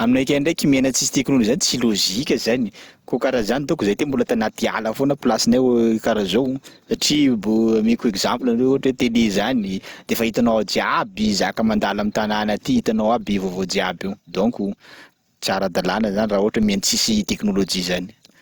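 At 3.42 s and again at 16.63 s the speech is hit by a DC step: the waveform's zero line suddenly jumps to a new offset, then relaxes back as a 5 Hz high-pass bleeds it away over a few tens of milliseconds. Each step sounds like a low thump under the unchanged speech. On the waveform the trace lifts abruptly and sags back; a spectrogram shows a brief full-height vertical line with energy concentrated at the bottom.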